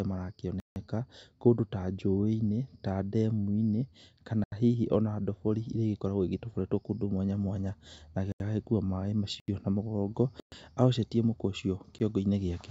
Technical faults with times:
0.41-2.08 automatic gain rising
0.60-0.76 block of digital silence
4.44-4.52 block of digital silence
8.32-8.40 block of digital silence
9.40-9.48 block of digital silence
10.40-10.52 block of digital silence
11.99 block of digital silence

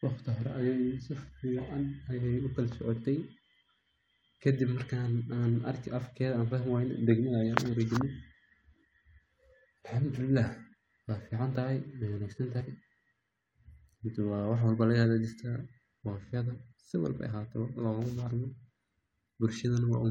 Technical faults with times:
12.60 compressed frames skipped
16.54 compressed frames skipped

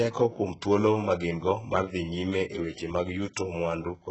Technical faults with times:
0.00-4.11 HE-AAC compression

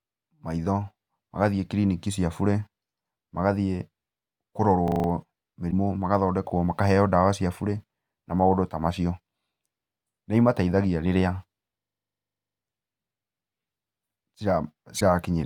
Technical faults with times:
4.88-5.08 system hang loop
5.67-5.73 damaged data in a compressed stream
11.80-12.60 system hang loop
14.96-15.02 damaged data in a compressed stream

